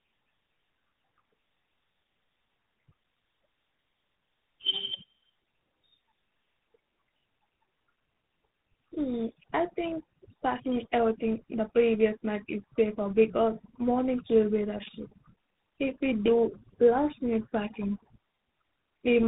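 From start to finish, the speech shows tandem speech coding: the call was decoded and re-encoded as it crossed links using different speech codecs, which fits a GSM full-rate leg followed by a 32 kbit/s ADPCM stage such as G.726. The second coder had to work on audio the first had already degraded, so the damage compounds. The speech is rough and noisy with a warble, and muffled, with nothing above 3.8 kHz.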